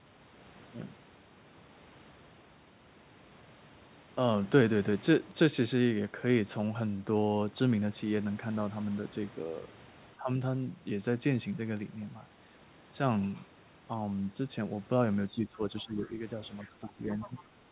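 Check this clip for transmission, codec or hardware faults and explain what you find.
Two echo-canceller faults appear in the second half of this speech, where both ends of the call seem to be talking at once.

Speech suppressed in double talk, at 10.17–10.29, 15.31–16.11 and 16.64–17.51 s: the echo canceller likely mistook overlap for echo and attenuated everything, so the speech dips by about 10–15 dB.

Other side's voice leaking through, at 15.76–15.83 and 17.21–17.43 s: residual loudspeaker echo likely escaped cancellation and surfaces as a faint second voice, roughly 20–30 dB below the speech.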